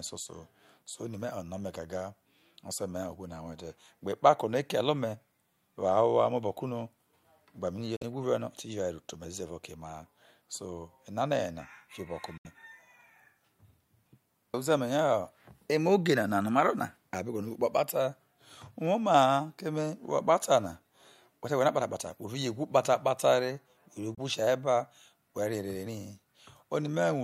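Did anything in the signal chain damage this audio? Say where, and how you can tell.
Yes. A Bluetooth dropout hits this speech at 7.96 to 8.03 s, at 12.37 to 12.47 s just after "yena fiobo no ke", and at 24.15 to 24.19 s just before "sia ba". The gaps run about 46, 70 and 23 ms, consistent with losing two, three and one packets of roughly 23 ms each. The likely cause is packets missing their slot on the wireless link to the headphones. The output falls silent, then resumes further along, as though the sound had kept playing.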